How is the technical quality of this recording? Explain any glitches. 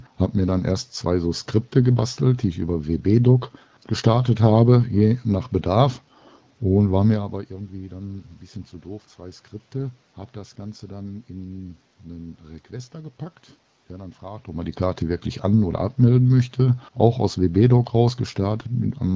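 Listening closely, nothing in this recording stood out as a glitch or technical problem worth flagging.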